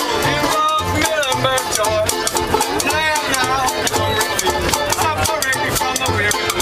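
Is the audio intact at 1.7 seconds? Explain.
No. A dropped buffer (overrun) occurs at about 1.67 s: a slight jump forward in the sound, with no gap of silence. The likely cause is that samples went uncollected before the hardware overwrote them, cutting out a few milliseconds and joining the two sides directly.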